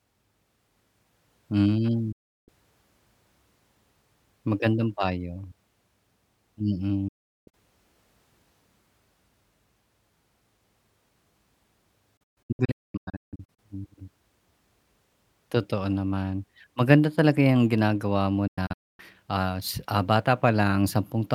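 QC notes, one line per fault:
2.12–2.49 s, digital broadcast dropout: the speech fades out over roughly 8 ms and stays silent for about 0.35 s before returning. The receiver muted when incoming frames failed their checks. A waveform shows a clean flat gap, and the spectrogram a blank vertical band across all frequencies.
7.08–7.54 s, digital broadcast dropout: about 0.42 s goes missing within a 0.45 s stretch, mostly as one hole of roughly 0.38 s. Each short fade marks a mute and return as good frames resumed. The waveform shows a near-empty slot, and the spectrogram a full-height blank column.
12.17–13.59 s, digital broadcast dropout: the longest disruption. Several holes totalling about 0.93 s are scattered over 1.4 s, and none is longer than about 0.22 s, so the speech stutters in and out. Intermittent reception kept breaking the decode. The spectrogram shows a comb of blank columns.
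18.47–19.00 s, digital broadcast dropout: just after "talaga yang ginagawa mo", about 0.38 s is lost across roughly 0.51 s, and the longest hole is near 0.26 s. The audio returns at "ah s ah". The holes show as flat waveform segments and empty spectrogram bands with abrupt edges.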